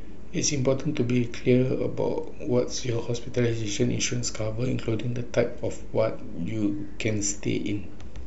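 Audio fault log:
throughout, DC offset: the speech waveform sits displaced from zero by a constant of about -31 dBFS. This is inaudible as a tone, but it eats into headroom on one polarity and appears as steady energy at 0 Hz, below the lowest audible frequencies.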